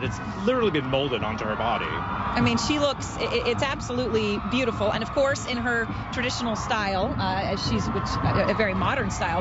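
Nothing stood out on listening; no technical faults could be heard anywhere in the audio.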